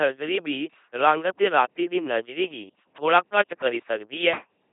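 Speech run through an LPC-10 vocoder the whole way through, and it's heavily mangled. Everything comes out as a buzzy, mechanical robot voice. Each moment gets rebuilt from either a pulse train or noise feeding a ten-pole filter. The 2.4 kbit/s rate and nothing above about 3.7 kHz leave it thin and dull.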